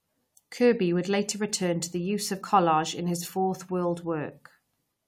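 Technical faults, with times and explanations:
No technical faults can be heard in this speech clip.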